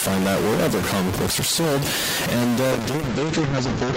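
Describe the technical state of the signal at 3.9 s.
At 3.9 s the speech has distortion, and noise fills the gaps between sounds. This is likely a stuck bit, one data bit held at 0 or 1.

From 2.73 s to the end, the speech also sounds rough, watery or muffled. This is a call bitrate drop: the encoder fell from 32 to 8 kbps, coding more coarsely and cutting the bandwidth from 20 kHz to 8 kHz.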